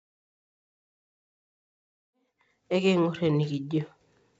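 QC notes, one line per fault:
Nothing to flag on this speech clip; it's all good as far as faults go.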